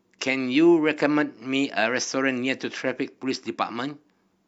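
Listening through this speech recording, nothing technical stood out.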